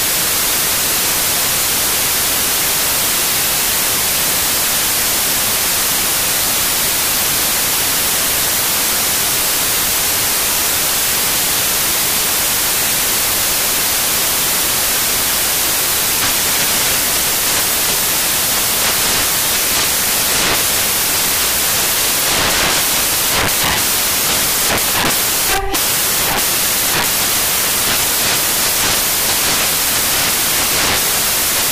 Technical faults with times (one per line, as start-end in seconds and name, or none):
0.00-31.71 samples built from the wrong bytes